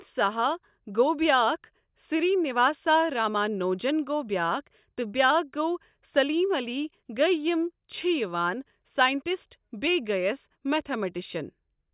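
No technical faults can be heard anywhere in the speech, so there are none to describe in time order.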